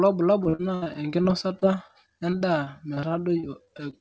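Repeated packet loss hits from 0.44 to 1.91 s and from 2.30 to 3.95 s. Each missing packet is filled by extending the previous sound, so the speech turns choppy and robotic.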